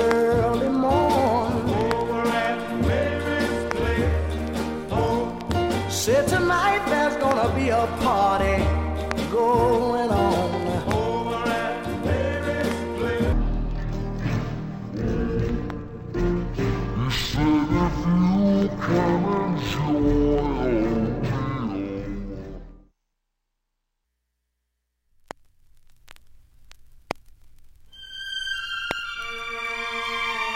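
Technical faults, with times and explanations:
13.33–24.05 s, stereo read as mono: interleaved left and right samples play as one channel, so sound runs at half speed, 12 semitones low, with a faint mirrored image higher up.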